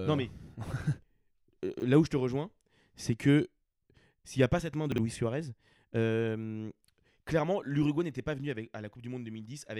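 At 1.74 to 1.82 s, just before "là où je te", a 20 ms chunk of this speech was delivered three chunks late and played after the ones meant to follow it, so chunks out of order briefly scramble the sound, with three hard joins. At 4.92 to 4.98 s, right after "pas cette main de", the same fault recurs with a chunk two places late, giving a shorter jumbled blip.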